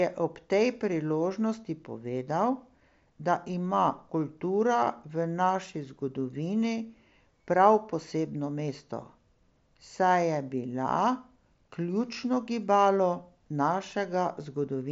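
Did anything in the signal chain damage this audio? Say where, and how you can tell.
No, nothing in the chain damaged this speech; it comes through a Bluetooth mSBC headset link at about 61 kbps, with the 8 kHz bandwidth and light coding grain that this codec normally leaves.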